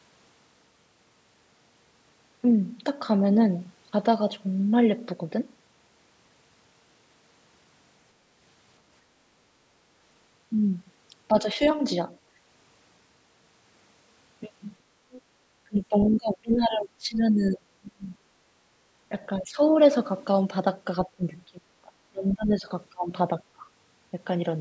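Speech suppressed in double talk first appears at 11.32 to 11.59 s as a brief, shallow dip of about 5 dB. Both ends were likely talking at once, and the echo canceller, unable to tell this talker from its own loudspeaker echo, turned the microphone down. The other side's voice leaking through follows at 15.11 to 15.22 s, a faint scrap about 25 dB below the speech that the canceller likely failed to remove from the microphone pickup.

Suppression then returns much harder from 15.65 to 18.06 s. The talker drops by as much as about 35 dB for roughly two seconds in total. Inside that stretch, at 16.01 to 16.17 s, more of the far side leaks through, louder this time at about 15 dB under the speech. Further dips follow at 19.09 to 19.6 s, reaching about 15 dB; at 21.07 to 23.12 s, reaching about 30 dB over about 1.5 s; and at 23.55 to 23.65 s, a short drop of about 20 dB.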